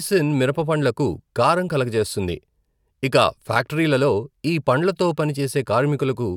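Nothing technical stands out in this bit of speech, so there's no fault to point to anywhere in it.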